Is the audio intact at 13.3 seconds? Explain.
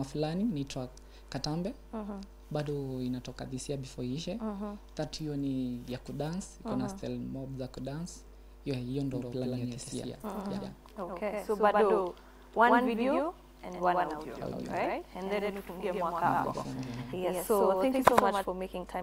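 No. A doubled audio track covers 9.14 to 18.44 s, including 13.3 s. A full-band copy about as loud as the original trails it by roughly a tenth of a second, with no decay or room colour. It likely comes from a slower second capture path.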